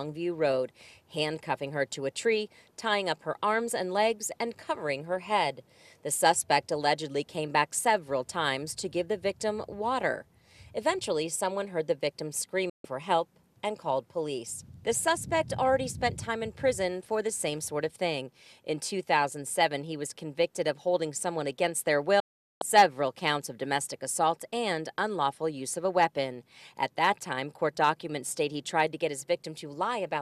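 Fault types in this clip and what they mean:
Digital broadcast dropout: bad or missing frames make the receiver mute, so the sound snaps to silence at 12.70 s for 0.16 s and at 22.20 s for 0.42 s, then returns.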